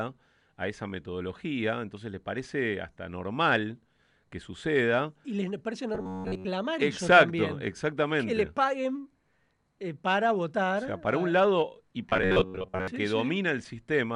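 From 5.95 to 6.46 s, and again from 12.10 to 12.88 s, the speech turns into a rigid metallic drone: robotic sound from repeated short buffers. A fixed 93.8 Hz buzz sits on the voice, which fits a segment about 10.7 ms long being looped, likely because audio arrived too late and most of the real signal was skipped. A spectrogram shows flat, evenly spaced harmonic lines; the waveform shows one short shape repeating identically.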